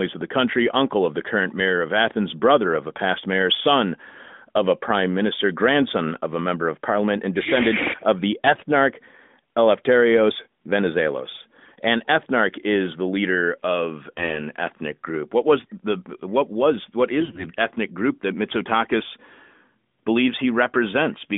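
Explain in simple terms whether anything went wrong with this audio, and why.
Twice the speech briefly turns hoarse and scratchy, almost gargling, from 8.44 to 8.63 s and again, a little longer and rougher, from 17.20 to 17.46 s. Pitch and loudness stay roughly in place. These are AMR bit errors: on a weak mobile link, some of the less protected bits in the phone codec's data arrived flipped. The phone decoded them anyway, so the sound was rebuilt from slightly wrong instructions, giving that gritty distortion on top of the ordinary narrowband phone sound.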